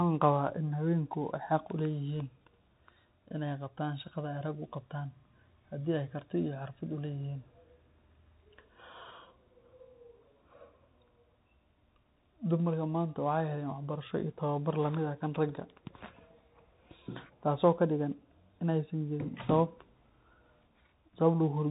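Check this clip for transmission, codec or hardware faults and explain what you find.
One fault runs through the whole clip. A Bluetooth CVSD headset codec is plainly audible from start to finish. It codes each sample as one up-or-down step, which fits a 64 kbps link. Nothing passes above 4 kHz, s sounds turn scratchy, and granular hiss sits under the speech.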